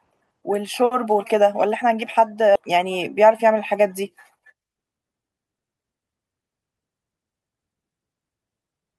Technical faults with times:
2.55-2.57 skip ahead
4.39-5.98 jitter buffer speed-up

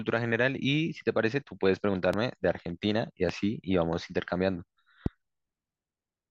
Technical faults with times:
2.13-2.16 loud pop
3.29-3.32 loud pop
5.06-5.08 loud pop

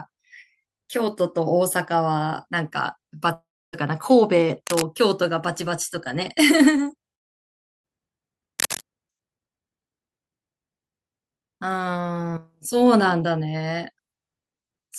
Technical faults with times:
3.33-3.75 long network dropout
4.67-4.82 cable scratch noise
7.15-7.86 long network dropout
8.59-8.81 cable scratch noise

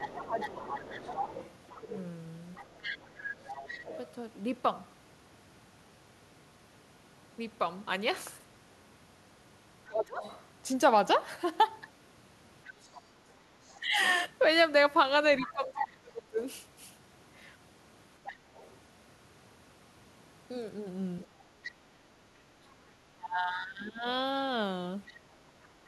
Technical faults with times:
0.00-3.98 other side's voice leaking through
0.24-3.91 speech suppressed in double talk
9.88-10.21 speech suppressed in double talk
10.22-21.72 other side's voice leaking through
13.80-16.38 speech suppressed in double talk
21.78-24.06 speech suppressed in double talk
25.07-25.68 other side's voice leaking through

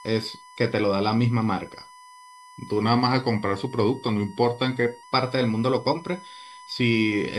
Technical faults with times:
0.00-7.38 USB whine
2.82-5.03 drift correction step

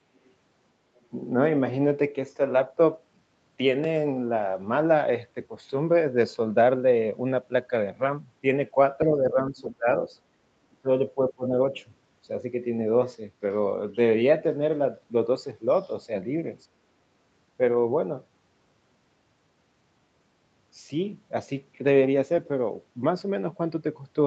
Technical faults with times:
0.16-0.32 other side's voice leaking through
0.95-1.00 other side's voice leaking through
9.05-9.88 speech suppressed in double talk
10.70-10.88 speech suppressed in double talk
11.14-11.51 speech suppressed in double talk
11.75-11.79 other side's voice leaking through

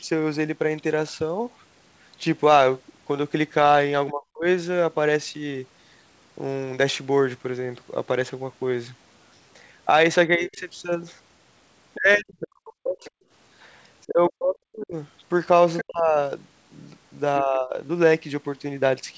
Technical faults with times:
4.11-4.45 speech suppressed in double talk
10.28-10.58 speech suppressed in double talk
11.96-13.24 speech suppressed in double talk
13.04-13.10 other side's voice leaking through
14.08-14.95 speech suppressed in double talk
15.78-15.82 other side's voice leaking through
15.82-16.18 speech suppressed in double talk
17.40-17.77 speech suppressed in double talk

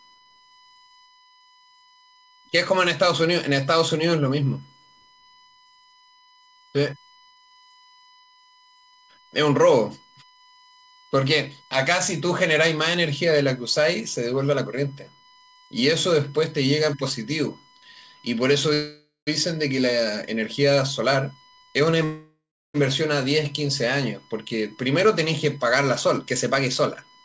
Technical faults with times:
0.00-27.25 USB whine
18.74-19.29 call audio freeze
21.00-21.96 jitter buffer speed-up
22.04-22.76 call audio freeze
24.46-26.28 jitter buffer speed-up
26.83-27.24 jitter buffer speed-up

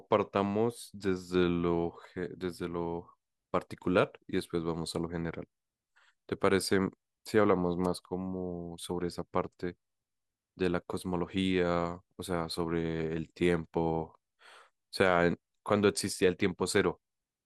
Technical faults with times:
7.84-7.87 wireless microphone noise hit

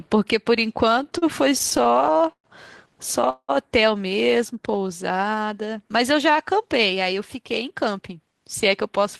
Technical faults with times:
0.85-2.46 repeated stalls (stutter)
3.30-3.50 call audio freeze
4.53-5.53 jitter buffer slow-down
7.35-8.41 jitter buffer speed-up

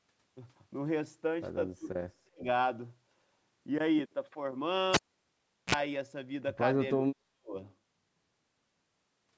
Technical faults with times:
1.78-2.46 speech suppressed in double talk
4.94-5.75 cable pulled and plugged in
6.97-7.56 speech suppressed in double talk

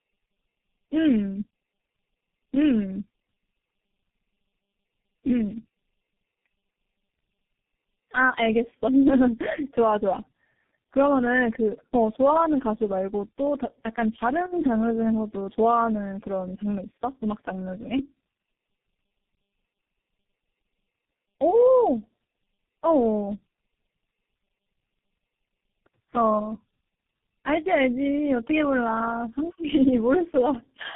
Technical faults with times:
0.00-30.95 tandem speech coding

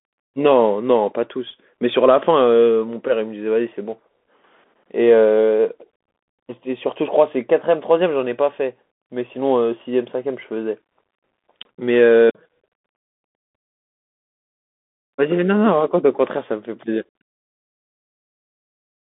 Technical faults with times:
0.00-19.13 Bluetooth CVSD headset codec

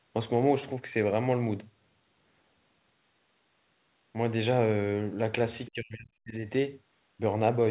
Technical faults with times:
5.66-5.71 other side's voice leaking through
5.69-6.42 speech suppressed in double talk

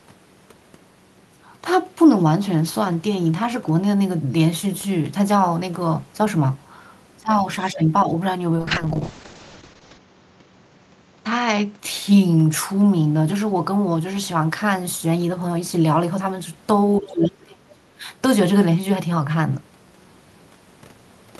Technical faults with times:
7.19-7.45 speech suppressed in double talk
7.62-7.83 other side's voice leaking through
7.73-8.09 speech suppressed in double talk
8.57-11.85 call bitrate drop
17.00-18.06 speech suppressed in double talk

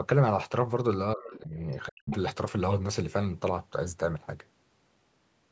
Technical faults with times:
1.15-1.56 speech suppressed in double talk
1.32-1.38 other side's voice leaking through
1.71-1.76 other side's voice leaking through
1.87-2.12 speech suppressed in double talk
2.11-2.16 other side's voice leaking through

